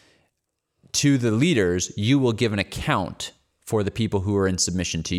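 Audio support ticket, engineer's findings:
No audible faults found in the signal path on listening; level and continuity hold steady across the speech recording with nothing that points to a faulty component.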